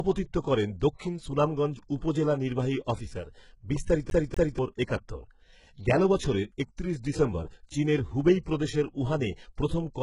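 HE-AAC compression runs through the whole speech clip. Nothing is present above 11.1 kHz, and the upper band has a heavy gritty, metallic sheen, with s sounds turning lispy. That points to a very low bitrate, where the codec likely rebuilds the treble by copying lower bands upward, so the harmonics no longer line up.

A CD stuck on one turn appears from 4.10 to 4.59 s, right after "উপজেলা নির্বাহী অফিসার বিস্তারিত". The same 0.24 s slice plays twice in a fast, even stutter with a brief mute at each jump, as though the laser were thrown back one track at the same spot on every rotation.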